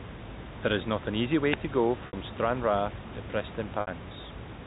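Between 1.52 and 1.57 s, just after "is not an easy" and before "to go", the wireless microphone's radio signal faded and the receiver's squelch cut in. This wireless microphone squelch dropout is a short swell of hiss followed by a brief near-silent hole before the sound returns.

At 2.07 to 2.13 s, right after "to go", and again at 3.81 to 3.87 s, about 60 ms of audio went missing, which fits two lost packets each time. The receiver concealed each gap with packet loss with pitch repetition, so the sound briefly holds on a buzzy, repeated tone before the speech resumes.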